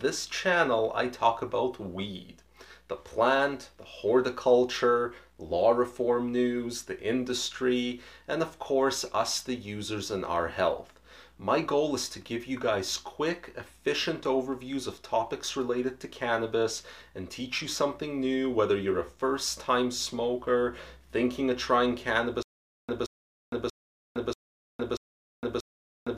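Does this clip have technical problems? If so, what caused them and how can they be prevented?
Yes. From 22.43 s to the end there's a stutter with silent gaps: a 174 ms burst replays six times, each followed by about 460 ms of dead silence, every 636 ms. That's likely a stalled stream re-serving its last buffer. Larger buffering and a steadier connection would prevent it.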